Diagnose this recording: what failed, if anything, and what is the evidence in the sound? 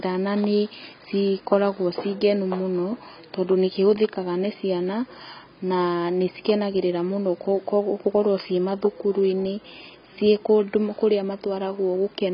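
The fault sits at the codec stage and runs through the whole speech recording: heavy AAC compression damage, with nothing above 5.4 kHz. What separates it from a plain low-pass filter or narrowband telephone path is that the damage lies inside the remaining band as well as at the top, a sign of coarse quantisation of spectral lines rather than a single cut-off. The likely cause is AAC-LC at a very low bitrate, consistent with about 16 kbps.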